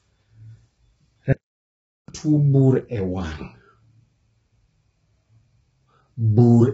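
Throughout, the speech sounds rough and grainy with nothing above 7.7 kHz, likely low-delay AAC compression working heavily at a rate that fits roughly 16 kbps. From 1.33 to 2.08 s a playback stall silences output for about 0.76 s, likely from the player running out of data, before resuming at "tuo bur e".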